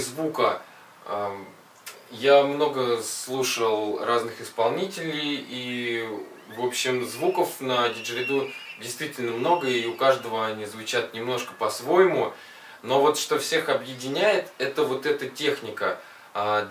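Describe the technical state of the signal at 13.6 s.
At 13.6 s the signal is intact, with no dropout, distortion or other fault audible at that point.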